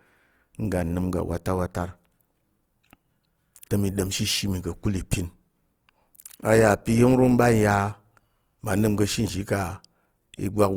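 The speech sounds rough and grainy throughout, with plainly audible codec damage. This is likely Opus compression in its music mode, fitting a bitrate near 24 kbps.

At 3.61 s there is pre-echo. A brief hiss, about 17 ms long, leads into a sharp attack. Quantisation noise spread across the block fills the quiet moment before it.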